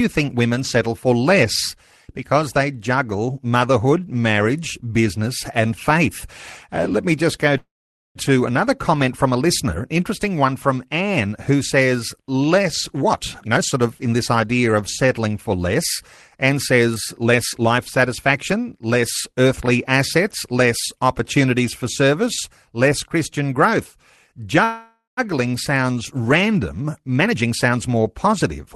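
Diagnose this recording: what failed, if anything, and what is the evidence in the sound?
The speech stops twice and resumes where it left off, with nothing lost. At 7.57 s, right after "let me just go", a short decaying buzz gives way to about half a second of silence before speech returns at 8.18 s. At 24.64 s a longer fading tail ends in a brief silence, with speech resuming at 25.20 s. This is a call audio freeze at the network and jitter-buffer stage, likely packets held up in transit. The receiver stretched the last sound until audio arrived, adding roughly 0.58 s and 0.53 s of delay.

Three stretches run fast at unchanged pitch: 13.02 to 16.02 s at 114%, 16.49 to 18.33 s at 106% (ending just before "less earthly assets less"), and 26.80 to 28.34 s at 120%, where the speech sounds noticeably hurried. This is jitter buffer speed-up in call processing. The buffer held more audio than its target, so the receiver repeatedly cut pitch-period-sized slices to drain it, removing roughly 0.4 s, 0.15 s and 0.3 s respectively.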